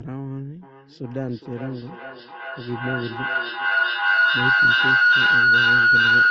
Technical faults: feedback howl

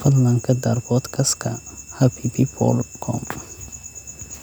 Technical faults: switching supply whistle

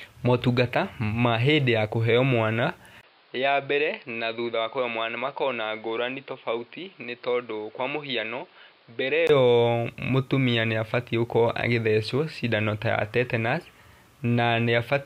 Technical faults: input switched to a poorer device

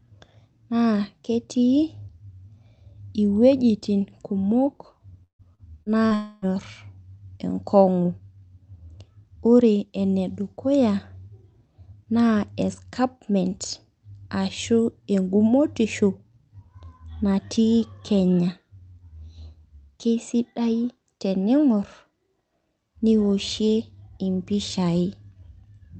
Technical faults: repeated packet loss (robotic sound); long network dropout

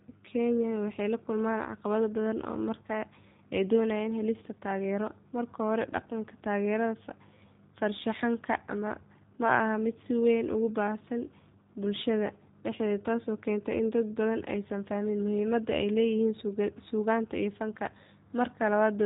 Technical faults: G.729 codec

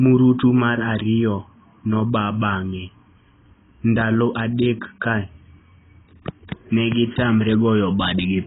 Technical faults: AAC compression

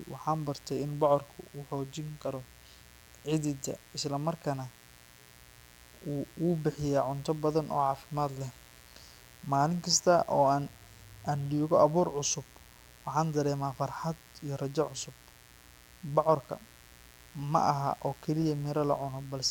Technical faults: mains buzz

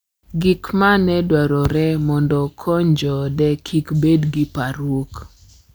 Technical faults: none

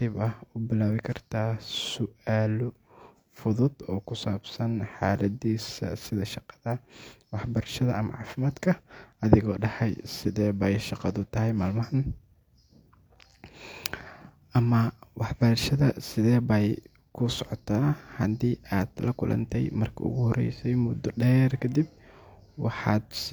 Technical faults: none

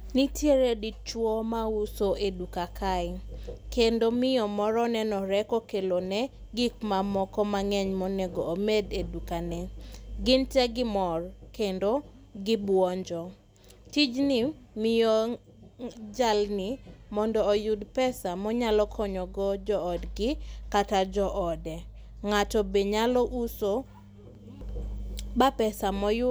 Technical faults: none

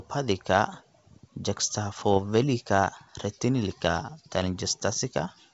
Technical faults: bit errors on an ADPCM link

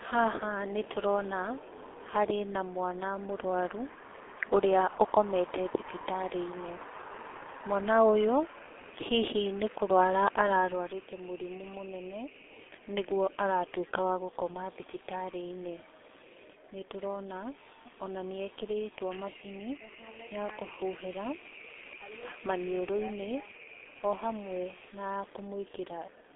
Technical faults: G.723.1 codec

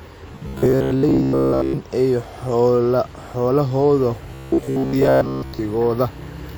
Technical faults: robotic sound from repeated short buffers

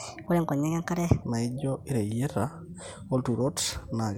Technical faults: section at the wrong speed

